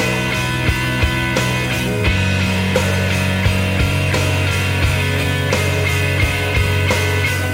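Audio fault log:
0.85–6.50 s, clock drift buffer slips: a short click recurs every 1.88 s, about four in all, while sound is present. The likely cause is two devices running on separate clocks that disagree by roughly 100 ppm, so the buffer between them drifts until a few samples, around seven, are dropped or repeated. On a waveform each slip is a step discontinuity; a spectrogram shows evenly spaced thin vertical broadband lines.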